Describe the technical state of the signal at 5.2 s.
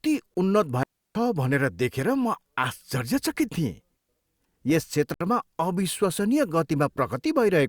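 A short hole breaks the speech from 5.14 to 5.21 s. This is a block of digital silence: about 64 ms of samples were replaced by zeros, and the signal drops out and returns with no fade.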